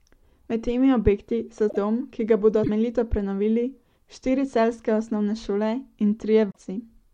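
Frames were likely dropped from the MP3 stream, breaking the bit reservoir, so each following frame looked back for its borrowed data and decoded bytes belonging to another frame. The speech skips forward and is briefly disrupted at 1.69 to 1.77 s, 2.63 to 2.70 s and 6.49 to 6.58 s. Each disturbance lasts 70 to 84 ms, roughly three 26.1 ms frames' worth before decoding recovers.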